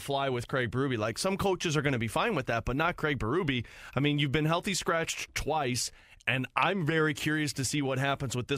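No technical faults can be heard.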